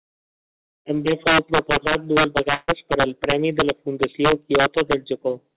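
Speech, passed through a call path whose spectrum stops at 4 kHz, consistent with G.711 mu-law. Throughout, integer overflow from about 6 dB of overdrive makes a small share of loud peaks wrap to the opposite sign, heard as harsh cracks and seen as vertical spikes flipping polarity in the waveform. From 2.54 to 2.70 s, between "fou proposat dues" and "per al", a burst of packet loss removes about 140 ms of sound. The receiver filled the gap with a fading continuation, which shows as a smeared, decaying band on a spectrogram.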